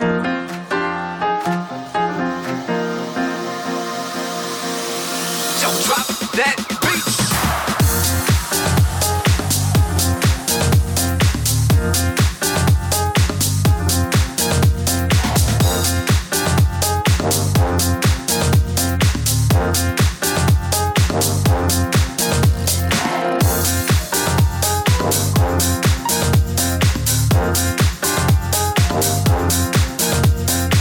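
No technical faults can be heard anywhere in this audio, and the signal holds steady and continuous throughout.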